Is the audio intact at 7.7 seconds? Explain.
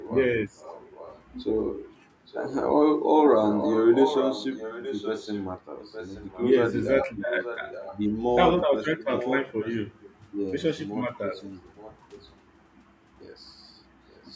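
No. From 7.27 to 8.0 s there is an echo leak, likely because the far end is playing the call through a loudspeaker and its echo canceller failed to remove everything its microphone picked up, so that residue was sent back. The result is a faint second copy of the speech trailing the original by 873 ms, sitting around 15 dB below it, a ghostly repeat layered under the live talk.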